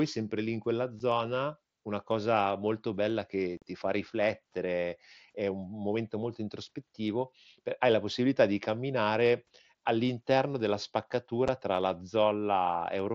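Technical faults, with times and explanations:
0.99 s, 3.57–3.62 s, 11.48 s: unconcealed Bluetooth headset packet loss. Voice packets were dropped and silence replaced them, leaving sharp-edged gaps of 7.5 ms after "sempre lì in quella", 45 ms after "una cosa molto bella", and 7.5 ms before "tra la". On the waveform each is a flat dropout with abrupt edges, and on the spectrogram a blank vertical stripe across the mSBC band up to 8 kHz.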